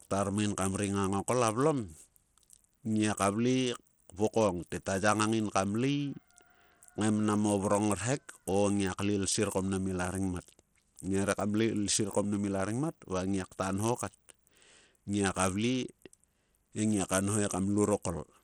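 From start to finish the speech sounds gritty and thin: the top end keeps dropping away and flickering back, a rough grain rides on the voice, and metallic aliasing clings to it. This is likely Bluetooth SBC compression. SBC splits the signal into a few wide bands with crude bit allocation, and at a starved setting, which fits a bitrate near 80 kbps, the upper bands lose their bits while the rest is coarsely quantised.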